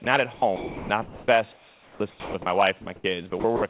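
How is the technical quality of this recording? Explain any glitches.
It's a narrowband call recording, nothing above 4 kHz, which fits a G.711 phone-style path, and the voice detector keeps cutting into the speech.

Sound dropped by the voice detector, at 0.04 s and again from 2.82 to 2.86 s: the speech vanishes briefly into steady hiss, 20 ms then 40 ms. The likely cause is the sender's detector treating the speech as background.

Sound chopped by the voice detector, from 0.34 to 2.46 s and from 3.30 to 3.62 s: the detector likely toggled repeatedly. About 1.4 s of the first stretch and 120 ms of the second become synthetic noise, so the speech sounds choppy.

Comfort noise in place of the background, from 2.82 to 3.04 s: the real room tone gives way to a flat, featureless hiss for around 120 ms, likely generated by the receiver while the sender stopped transmitting.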